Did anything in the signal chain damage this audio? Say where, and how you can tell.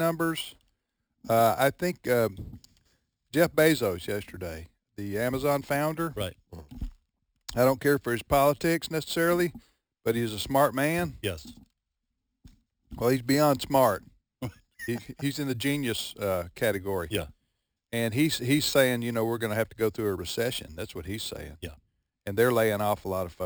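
Yes. A bright, metallic fizz rides on the speech from start to finish, rising and falling with each syllable and sitting about 17 dB below the voice, with its lowest band filling roughly 6 kHz to 12 kHz. This is imaging from sample-and-hold upsampling at the rate-conversion stage, which fits audio originally at 12 kHz being raised to 44.1 kHz by simply repeating samples. With no smoothing filter, mirrored copies of the voice's spectrum leak in above the old band.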